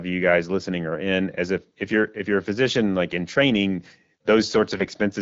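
AMR bit errors strike near the end of the speech, from 4.69 to 4.88 s. Over those 0.18 s a few percent of the weakly protected bits in the AMR frames were corrupted while the check on the key bits still passed, so the decoder played them as valid. The excitation pulses land in the wrong positions and the fine pitch, gain and spectral values drift. Pitch and loudness hold roughly steady, but the sound turns hoarse, scratchy and gargly. The AMR-WB coding around it, at a rate that fits 12.65 kbit/s, leaves only light codec colouring.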